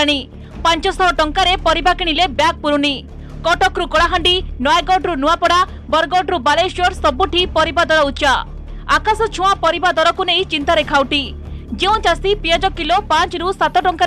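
No technical faults can be heard anywhere in the signal.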